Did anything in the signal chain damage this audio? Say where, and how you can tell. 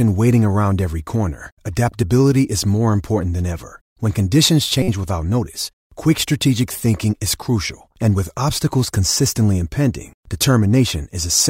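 Yes. A corrupt frame was decoded at the codec stage, between 4.82 and 4.89 s of this speech clip. A short, harsh burst cuts across the sound there. The 70 ms length points to a few consecutive compressed frames whose bits were damaged, yet the decoder rendered them anyway, so misread gains and codes placed energy at the wrong frequencies. A spectrogram would show a sharp-edged block of misplaced energy unrelated to the surrounding harmonics, and the waveform would show a brief spike.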